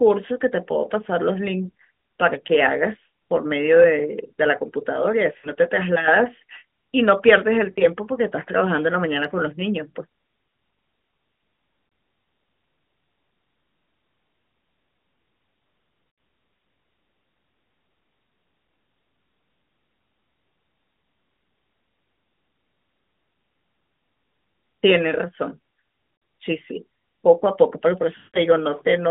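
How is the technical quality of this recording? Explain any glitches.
The recording has six short dropouts from lost AMR speech frames, at 5.38, 7.72, 11.88, 16.1, 26.16 and 28.18 s. The line sounds like narrowband AMR mobile audio, with nothing much above 3.6 kHz and only light codec colouring. Radio errors corrupted frames, and the decoder filled the 40 to 160 ms gaps by repeating the last good sound at falling gain. That gives brief, drawn-out, fading sounds. At 28.18 s the gap is about 160 ms, so the sound smears, fades out, and returns roughly.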